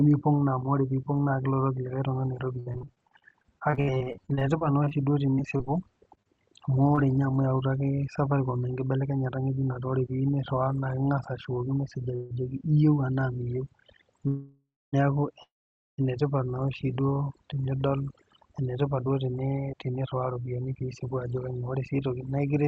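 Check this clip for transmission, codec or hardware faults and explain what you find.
Yes, there are several faults, layered on speech that is band-limited to about 8 kHz throughout, as a call path running a wideband codec such as Opus would leave it.

Overdone noise removal runs through the whole clip. A noise suppressor set far too aggressively has pulled individual frequency bands down or out whenever they sat close to its noise estimate, taking the quieter parts of the voice with them. Pauses fall to near silence sprinkled with twinkling specks. Codec coding noise sits on top of the whole signal, but these chirping artefacts come and go with level in each band, which is the mark of a suppressor.

Repeated packet loss (robotic sound) runs from 2.59 to 6.99 s. Dozens of short holes, none longer than about 66 ms, were each bridged by extending the last bit of sound, so roughly 15% of that stretch is patched. 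Because the holes come in quick succession, the speech turns choppy, with small pieces actually missing. That loss of material is what distinguishes it from the freezes later on.

Jitter buffer speed-up occurs at 8.93 to 10.69 s and again at 17.54 to 22.37 s. The receiver held more audio than it wanted and shed the surplus by cutting out short pitch-period-sized slices many times in a row. The first stretch runs 3% fast, removing a few tens of milliseconds. The second runs 11% fast, removing about half a second. The pitch stays put while the pace quickens, and the second stretch sounds hurried. Simple resampling would instead raise the pitch.

Call audio freezes occur at 12.15 to 12.32 s, 14.28 to 14.95 s and 15.43 to 16.00 s. Each most likely comes from packets stalling until the jitter buffer ran dry. The first is a 147 ms smeared hold with no silence. The second holds for about 0.65 s, fading into about 260 ms of silence. 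The third holds for about 0.55 s and is almost entirely silent, about 500 ms. Speech then resumes exactly where it stopped. Nothing is lost, only delay is added, which separates these from the choppy packet loss earlier.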